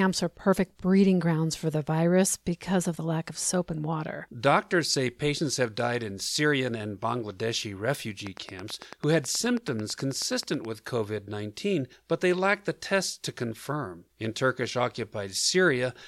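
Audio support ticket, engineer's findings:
Train of clicks, 8.27–10.66 s: regular ticking, 9.2 per second, about twenty pulses peaking about 5 dB above speech; likely nearby interference injecting near-identical pulses.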